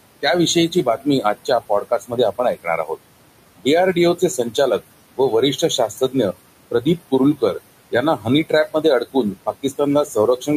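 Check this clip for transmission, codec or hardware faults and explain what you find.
Two faults come from the noise suppressor. One is heard throughout the clip, and the other recurs in five stretches of speech.

Noise suppressor artifacts run through the whole clip. The suppressor pulls the room noise, which sits about 15 dB below the speech, down by about 21 dB wherever it classes a band as steady noise. The residue pumps between phrases.

Speech cut by the noise suppressor occurs in five spans: 0.22–2.91 s, 3.57–4.82 s, 5.17–6.35 s, 6.71–7.56 s, and 7.91 s to the end. In each span the suppressor mistakes quiet speech detail for noise and lowers it by about 16 to 20 dB. The result is speech that sounds swallowed or faint. The first span loses roughly 0.7 s of speech.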